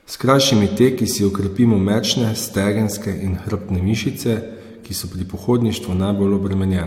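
From start to finish, the speech has likely been through transcoding between lossy codecs, with an MP3-style encode followed by an AAC-LC encode. The second encoder spent its limited bits reproducing the first one's artefacts while adding its own. Both kinds of damage sit together and are heard at once. Nothing remains above 16.6 kHz, the lowest cut-off in the chain.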